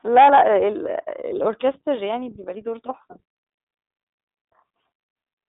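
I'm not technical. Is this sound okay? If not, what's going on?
No. The whole recording has gone through the iLBC codec, a phone-call compressor. It keeps only a narrow middle band, roughly 300 Hz to 3.7 kHz, so speech sounds thin and muffled. It handles each 30 ms slice separately, which adds a clearly audible rough, synthetic edge.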